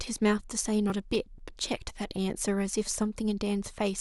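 Speech carrying a run of regular ticks from 0.17 s to 1.89 s, spaced every 0.25 s, each marking a few milliseconds of skipped audio. These are periodic USB or driver dropouts: something stalls the audio driver or USB bus on a fixed cycle, discarding samples each time.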